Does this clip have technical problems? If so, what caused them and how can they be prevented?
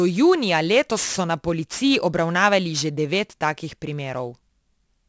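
Yes. There's aliasing throughout this speech clip: the sibilants sound gritty, and the top end piles up hard against about 8 kHz. Content above that edge has folded back as wrong pitches, roughly 15 dB below the voice, which fits a drop from 44.1 kHz to 16 kHz with no filtering first. To prevent it, low-pass below 8 kHz before resampling, or just use a proper resampler.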